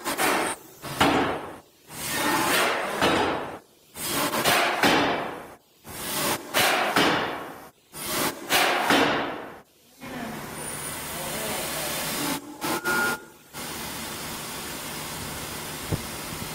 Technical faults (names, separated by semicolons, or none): adaptive stream starting at a low bitrate